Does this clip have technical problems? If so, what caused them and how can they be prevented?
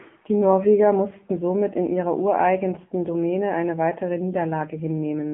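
Yes. The whole clip went through the AMR narrowband mobile codec: nothing above 3.6 kHz, a 150 Hz to 3.4 kHz phone band, and a buzzy, synthetic edge on the speech that fits a low mode around 7.95 kbps. Recording locally or using a wideband path avoids it.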